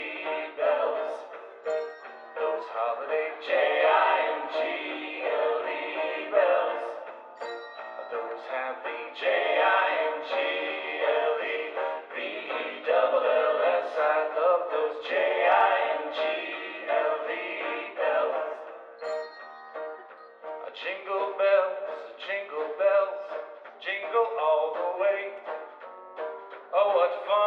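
No technical faults occur anywhere in the clip, so there is nothing to set out in time order.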